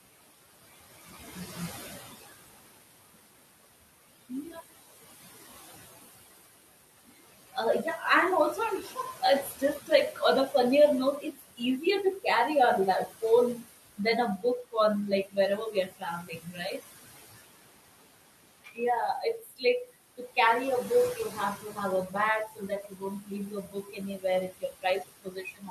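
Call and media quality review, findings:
Noise suppressor artifacts, whole clip. Background pulled down about 18 dB between phrases, then rising back under speech.

Component: noise suppressor. Mechanism: per-frame gain on bands judged steady noise. Room noise, about 12 dB below speech, is the material being gated. Its pumping is the audible symptom.

Speech cut by the noise suppressor, six spans: 7.53–8.02 s, ending before "and also"; 8.82–10.54 s, after "and also"; 11.2–12.26 s; 13.06–16.81 s; 18.64–20.37 s; 21.15 s to the end.

Drops of about 10 to 21 dB, deepest late. Fragments swallowed or faint, from a fraction of a second up to roughly a second. Suppressor misclassifies soft consonants and endings as noise and attenuates them.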